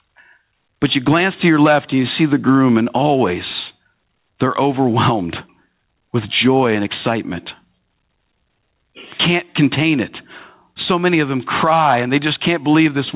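Right from the start and all the way through, there's gain pumping in this speech. The gain gets yanked down the moment anything loud comes in, a swing of roughly 15 dB. Loud and quiet passages sit squashed close together in level. The likely cause is input gain set far too hot, with a fast limiter clamping down on each peak. The call path's narrow band, with nothing above 4 kHz, fits an A-law telephone codec.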